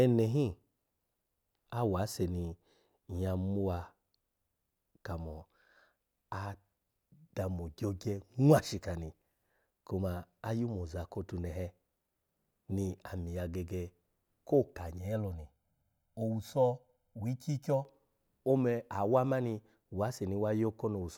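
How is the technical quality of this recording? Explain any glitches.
The recording has one glitch. Channel delay (comb filtering) runs from 14.98 to 17.85 s: one channel lags the other by roughly 1.5 ms, and summing them cancels evenly spaced frequencies, the first near 400 Hz. The speech sounds hollow and phasey there.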